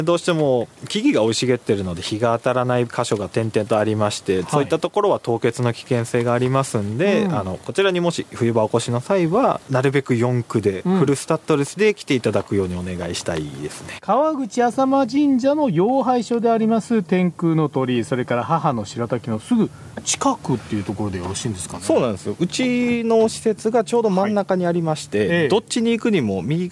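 From 25.1 s to the end, the resampler restarted on every block: the 48 kHz to 24 kHz conversion ran on each 100 ms block in isolation, so at every block edge the filter had no real neighbouring samples and filled in silence or wrapped-around material instead. Each boundary picks up a small error, heard as a steady ticking at 10 Hz that rides on the audio and falls away wherever the signal drops out.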